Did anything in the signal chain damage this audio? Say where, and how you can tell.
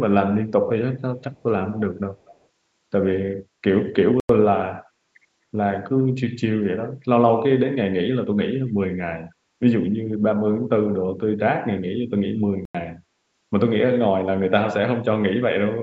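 Yes. At 1.32–1.43 s and 2.16–2.38 s a faint, delayed copy of the speech trails the original by 242 ms, roughly 40 dB and then 30 dB down. This is likely an echo leak in call processing: the far end's echo canceller let loudspeaker pickup return. On a spectrogram it appears as a dim ghost of the harmonics, shifted 242 ms later.

At 4.2 s and 12.65 s the audio cuts out for 93 ms, then resumes as though it had played on through the gap. This is likely a Bluetooth dropout on the playback link, where late packets were discarded. The waveform shows a flat line, and the spectrogram shows a clean vertical blank band across all frequencies.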